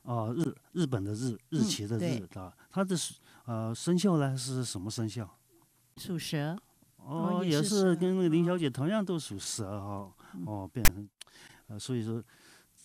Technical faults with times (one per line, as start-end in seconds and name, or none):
10.85-10.89 file tags played as audio